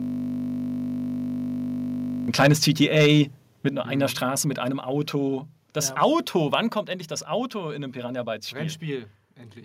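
From the very start of the audio until 2.28 s, a system hang loop is already under way: a single 20 ms slice of the speech repeats exactly, over a hundred times, as the sound hardware keeps cycling one buffer while the driver stalls. At that length it becomes a steady 50 Hz buzz rather than a stutter. On a waveform, identical 20 ms cycles tile the whole stretch. A spectrogram shows evenly spaced harmonic lines at multiples of 50 Hz, frozen in place with no speech movement.

Microphone overload follows from 2.39 to 3.21 s, likely from the input volume being set too high so that peaks run about 7 dB past the converter's limit. Roughly a few percent of samples are clipped, giving the loudest syllables a harsh, crackly edge. The waveform shows flat-topped peaks, and the spectrogram shows broadband smears above the speech harmonics at each clipped peak.

Inside that overload, at 2.53 s, the microphone volume is stepped down by about 2 dB. 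This is likely the call software reacting to the clipping by cutting the device's input gain in one step. Voice and background drop together, seen as an abrupt step in the waveform envelope and a uniform darkening across the spectrogram. A larger step of about 6 dB comes at 3.69 s, just before "nur einer mhm".

A brief second microphone overload at 6.02 to 6.05 s pushes peaks about 2 dB over, with roughly 2% of samples clipped. It is heard as a short crackle and seen as a few squared-off peaks.

At 6.75 s, just before "endlich das", the microphone volume is stepped down again, by about 4 dB, likely another automatic gain cut. The level drops suddenly, showing as a clean step in the waveform envelope and a uniform dimming across all frequencies in the spectrogram.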